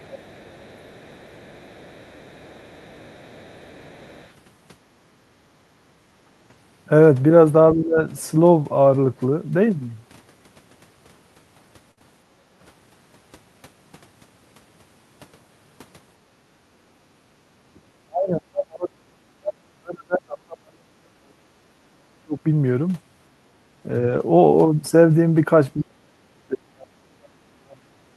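From 0.0 to 4.3 s a faint second voice sits under the speech, very roughly 30 dB down. It is likely the other side leaking through: the far end played on the loudspeaker and the echo canceller did not fully remove it. On a spectrogram it shows as weak, overlapping harmonic traces.

The room background is gated by the echo canceller at 5.43 to 5.55 s (about 7 dB deep) and 5.76 to 5.88 s (about 10 dB). The canceller clamped the microphone while the loudspeaker played. On a waveform the noise floor briefly sinks in shallow notches.

From 7.74 to 7.98 s the speech dips by roughly 20 dB for around a fifth of a second. This is likely speech suppressed in double talk: both sides spoke at once, and the canceller turned down the talker along with the echo. The waveform envelope pinches inward there.

At 11.91 to 11.99 s a burst of packet loss leaves 60 ms missing. Of that, 55 ms is filled by continuing the last sound and fading it, so it comes out as a held buzz or decaying hiss. 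On a spectrogram this looks like frozen, smeared harmonics that fade out, then a jump.

Right after, at 11.99 to 12.03 s, a short concealed packet loss of 20 ms is patched over 17 ms. It is heard as a quick smear before the real audio blends back in, and shows as a brief blurred column.

Further background gating follows at 12.35 to 12.46 s (about 9 dB) and 16.22 to 16.41 s (about 11 dB). Both look like clear dips in the noise floor.

From 18.05 to 22.45 s the speech is pushed down by as much as roughly 40 dB over about four seconds. It dips, thins and breaks into pieces, likely again speech suppressed in double talk. The spectrogram loses its upper energy, and the waveform collapses in ragged stretches.

From 24.03 to 24.21 s, lost packets are rebuilt from error correction, about 100 ms in total. The spread of the damage fits several separate lost packets, each replaced by a low-bitrate copy of it. 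The sound is rougher and noisier but has no gap. On a spectrogram the harmonics look coarser and grainier.

From 25.74 s to the end, the speech is again cut by up to roughly 40 dB, likely suppressed in double talk, with the same chopped, dulled envelope.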